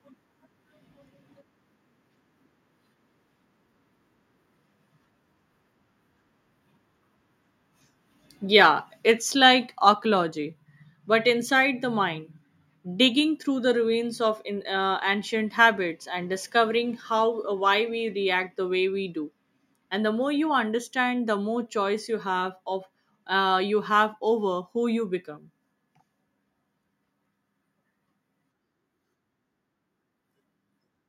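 A speech recording where the level of the voice and the background drops abruptly twice, at 9.21 s and again at 10.23 s, each time by about 2 dB. This is likely the microphone volume stepped down by call software reacting to a hot input level.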